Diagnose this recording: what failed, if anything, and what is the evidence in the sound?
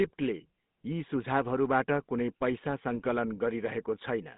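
The whole clip has a buzzy, gravelly roughness over a band that runs only from about 150 Hz to 3.7 kHz, with the codec damage plainly audible. This points to the codec stage: GSM full-rate coding, consistent with its 13 kbps rate. The decoder rebuilds speech from a vocal-tract filter excited by coarse, regularly spaced pulses, keeping only a fraction of the excitation detail. That thin, pulse-driven excitation produces the grainy buzz, and the narrow line band explains the missing top end.

From 2.99 to 3.06 s the speech briefly breaks into a squawking, gargling burst. These are GSM bit errors, a network-stage fault on a degraded radio link. Corrupted bits reached the decoder, so the filter, pitch or gain parameters it used were wrong for that short stretch. The spectrum was bent or the level jumped. The burst lasts roughly 70 ms, which fits a few consecutive 20 ms frames being hit.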